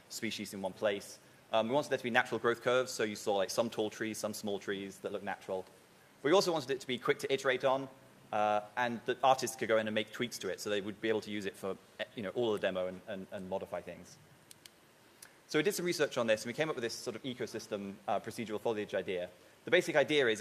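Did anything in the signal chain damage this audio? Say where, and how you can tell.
No, nothing in the signal chain audibly damaged this audio, and no stage has left a mark on the signal that a listener can pick out.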